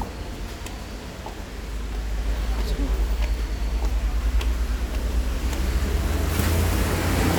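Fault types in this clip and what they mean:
Nothing to flag here, as there are no technical faults anywhere in this sound.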